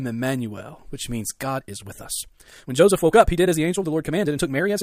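From 1.36 s, after "which means", a time-stretched section runs to the end, sped up about 1.57 times at unchanged pitch, so the speech turns rushed. Harmonic bands keep their spacing on a spectrogram while the patterns crowd together, likely from software fitting the audio to a set length.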